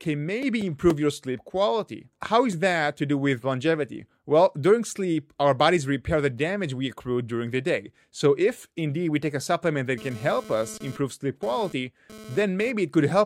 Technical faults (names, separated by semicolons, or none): GSM phone buzz